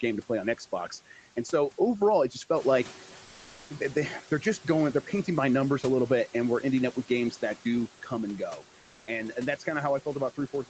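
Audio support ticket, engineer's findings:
Noise suppressor artifacts, throughout: background pumped down about 10 dB between phrases, swelling under speech. Spectrogram: noise floor dips in gaps; waveform floor breathes.

Comfort noise in place of the background: 3.25–3.69 s (440 ms) and 8.79–9.07 s (280 ms, between "do come and go" and "and and that's"). Steady featureless hiss at unchanged level, likely Opus DTX. Spectrogram: smooth uniform band.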